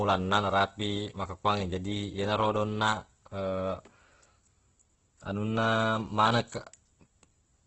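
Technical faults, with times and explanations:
Throughout, Opus compression: the speech sounds grainy and rough, with nothing above about 8.1 kHz. That fits a low-rate encoder, around 12 kbps, which is likely the cause. It runs short of bits and fills bands with noise or folded copies instead of real detail.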